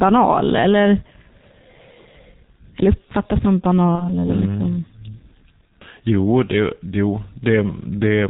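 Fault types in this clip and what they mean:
G.723.1 codec: a 6.3 kbit/s telephony coder that leaves nothing above 4 kHz and heavily damages the speech throughout, sounding muffled and hoarse with blurred consonants.
VoIP packet loss concealed by the speech codec: one lost 30 ms frame around 3.95 s, filled with extrapolated sound rather than silence; distortion lingers until about 4.14 s as the decoder recovers.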